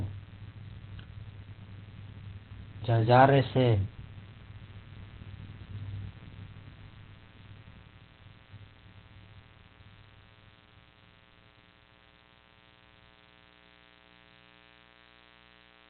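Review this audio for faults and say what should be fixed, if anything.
Mains buzz runs through the whole recording: a steady, raspy 60 Hz buzz sitting roughly 25 dB under the speech. Sharp switching spikes, twice per mains cycle, spread its harmonics up into the kilohertz range. That makes it harsh rather than the smooth, low tone of plain hum. Prevent it with shielded, properly grounded cabling kept away from dimmers and switching power supplies.

The speech is muffled and hoarse from start to finish, with nothing above 4.3 kHz. The likely cause is heavy Opus compression in its narrowband speech (SILK) mode, at a rate that fits roughly 12 kbps. A plain low-pass filter would keep the voice clean, but this adds hoarse roughness without MP3-style swirling. Prevent it by encoding at a higher bitrate with full bandwidth.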